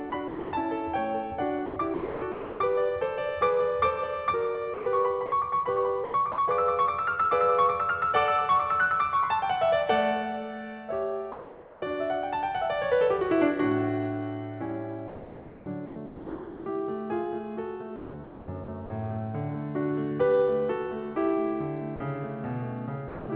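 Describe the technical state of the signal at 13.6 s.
At 13.6 s the music comes through intact with no fault, carried normally over the WebRTC call path, whose G.711 mu-law coding leaves nothing above 4 kHz.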